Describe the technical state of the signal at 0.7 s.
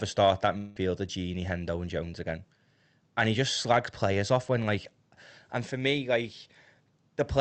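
At 0.7 s the signal sits inside a gap running from 0.57 to 0.78 s, just after "start that". For about 0.18 s the sound is not real audio but a fading buzzy continuation of the last sound, stretched out by the receiver's concealment, with no silent stretch. When audio resumes, roughly 0.18 s of content is simply gone. The likely cause is a long network dropout on the Opus call path, whose output here extends to about 8 kHz.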